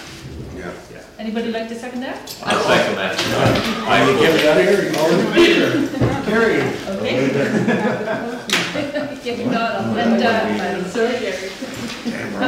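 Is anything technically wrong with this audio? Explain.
Yes, there's hard clipping throughout. The signal is driven about 8 dB past what the stage can pass, so around one percent of samples get sliced flat at the peaks, giving harsh crackle on the loud moments.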